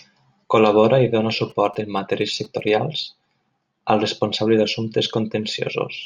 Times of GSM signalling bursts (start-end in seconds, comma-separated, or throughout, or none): 1.50-2.70